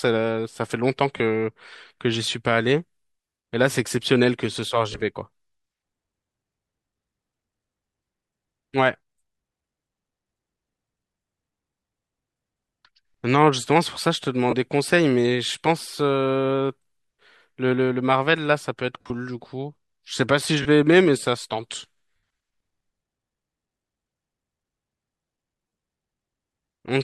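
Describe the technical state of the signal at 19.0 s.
Lost LE Audio frames from 19.01 to 19.10 s: about 68 ms of gaps across 90 ms, the longest run around 50 ms. The LC3 decoder repeats the last spectrum with random signs, smearing the speech into noisy hiss. On a spectrogram the harmonics blur into flat, grainy bands.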